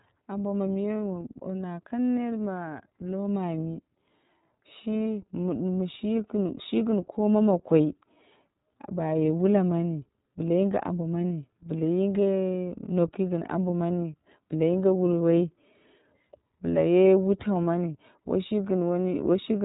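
From start to finish the speech passes through the iLBC codec, with nothing above about 3.8 kHz and a plainly audible rough, synthetic edge. Unlike a simple band limit, each frame is rebuilt independently, and the grainy texture fits 30 ms frames at roughly 13 kbps.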